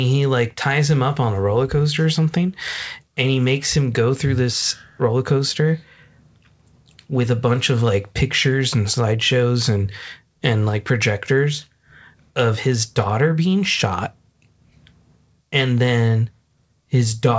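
No faults found in the speech; the call path runs as expected, with nothing above 8 kHz, consistent with a wideband call codec such as G.722.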